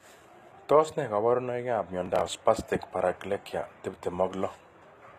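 Throughout, the treble sounds synthetic and s sounds turn gritty, metallic or lispy. This is plainly audible. Likely cause: HE-AAC compression rebuilding the highs, fitting a low bitrate near 24 kbps.

From 2.06 to 2.35 s, between "ne kaborunoikab" and "spastic paraplegia", a burst of processor overload crackle tears the sound. Around fifteen buffers of a few milliseconds each missed their deadline and were skipped.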